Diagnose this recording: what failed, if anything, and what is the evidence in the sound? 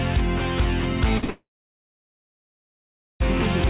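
Network stage, short concealed packet loss: two back-to-back 40 ms gaps at 1.18 and 1.24 s were filled by extending the last sound, heard as a brief smear.

Network stage, a long network dropout is the likely cause: from 1.30 s the patched-in sound fades into roughly 1.8 s of near-silence, and audio resumes at 3.22 s with that stretch missing.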